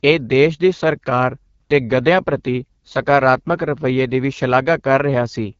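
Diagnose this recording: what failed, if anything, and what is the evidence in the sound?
The failure is at the codec stage: the speech has passed through the AMR wideband (HD Voice) codec at a low rate. Throughout the clip there is no content above about 7.5 kHz, and the voice has a plainly audible rough, raspy texture. The codec models speech below 6.4 kHz as pulses driving a vocal tract filter and fills the top band with shaped noise. The rasp points to one of its lowest modes, around 8.85 kbit/s, where that model is too coarse to sound clean.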